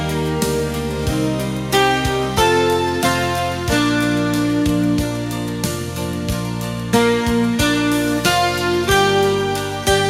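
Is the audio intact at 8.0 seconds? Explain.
Yes, at 8.0 seconds the audio plays through cleanly, with no dropout, click, distortion or other fault at that moment.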